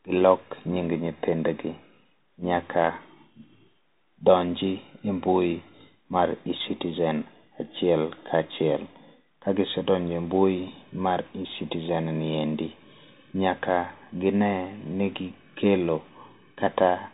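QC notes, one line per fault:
throughout: Bluetooth CVSD headset codec. The speech is squeezed into a narrowband channel with nothing above 3.8 kHz, and its one-bit delta coding, whose step lags loud high sounds, leaves s sounds scratchy and a granular hiss beneath the speech, damage that is plainly audible.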